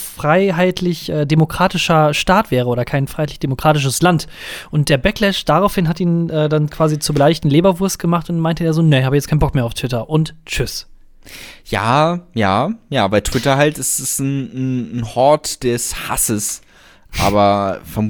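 No technical faults are audible.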